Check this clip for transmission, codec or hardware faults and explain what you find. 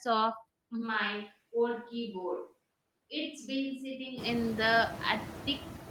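Two faults stand out in this speech recording, one running through the whole clip and one confined to a middle stretch.

Noise suppressor artifacts are present throughout. The suppressor estimates the steady background and pulls those bands down frame by frame, by about 19 dB here, so the noise sinks in pauses and swells back under speech.

A switch to a distant microphone runs from 0.83 s to 4.23 s. The speech abruptly becomes roomy and hollow, loses bass, drops about 5 dB in level, and picks up background noise around 25 dB below the voice. The likely cause is that the close microphone dropped out and a farther one, such as a camera's, took over. Unlike a simple gain dip, the tone and room sound change too, and both transitions are sudden.

The room noise that climbs by about 19 dB near 4.0 s, settling about 11 dB under the speech, belongs to the environment rather than the system.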